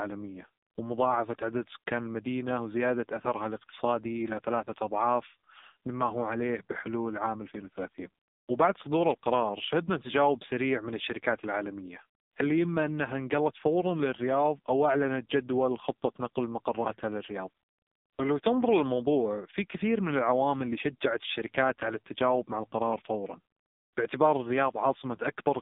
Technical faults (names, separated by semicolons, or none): AMR narrowband mobile codec